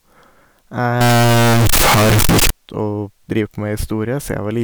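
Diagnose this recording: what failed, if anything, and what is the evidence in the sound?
From 1.01 s to 2.50 s the speech turns into a very loud, harsh, buzzing block, with background noise pushed up to the same level as the voice, though the pitch contour can still be followed. The fault sits at the sample-format conversion stage, most likely a float read as integer: 32-bit float samples interpreted as 32-bit integers. Each sample's sign and exponent bits then set its value, squaring the waveform off at an almost fixed, high level regardless of the original level.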